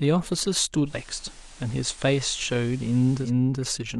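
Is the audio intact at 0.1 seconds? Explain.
Yes, the speech at 0.1 seconds is intact, with no audible fault at that moment.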